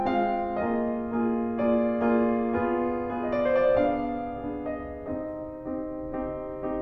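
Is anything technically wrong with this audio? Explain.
No, nothing technically wrong can be heard in this music. There are no dropouts, glitches or other playback faults at any point.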